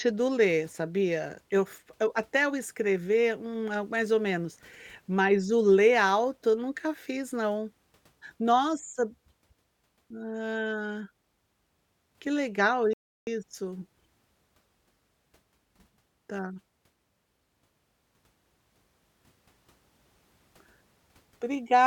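At 12.93 s a rebuffering stall halts the speech for about 0.34 s; unlike a dropout, nothing is skipped, as playback resumes exactly where it stopped.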